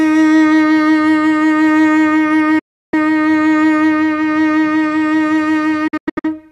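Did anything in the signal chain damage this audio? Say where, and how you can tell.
Yes. The music mutes twice: from 2.59 to 2.94 s it fades out in about 8 ms, leaves roughly a third of a second of silence and comes back further along. From 5.87 to 6.32 s it breaks into several short holes, the longest about 96 ms. That is a digital broadcast dropout at the reception and decoding stage. Damaged or missing frames failed their checks, so the receiver muted until valid frames resumed, and the music sent during those gaps is gone.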